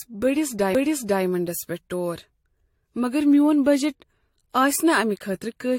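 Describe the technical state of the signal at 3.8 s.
Generation loss runs through the whole speech clip, including 3.8 s, and it most likely comes from the audio passing through a 64 kbit/s AAC-LC encoder about four times over. Each re-encode quantises on a shifted frame grid. Noise and spectral holes accumulate, leaving the sound swirly, hollow and smeared, with blurred attacks and nothing above about 16.6 kHz.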